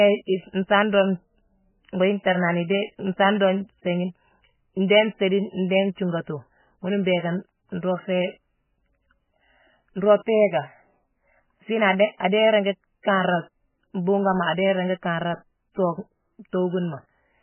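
From start to finish, the speech carries heavy MP3 compression damage. Nothing is heard above 3 kHz, so the top is cleanly sliced off and sibilants lose their hiss. The rest sounds watery and swirling. Weak frequency lines drop in and out between frames, leaving metallic chirps on s sounds and smeared consonant attacks. The damage is severe enough to point to a very low bitrate, roughly 10 kbps. That is the likely cause.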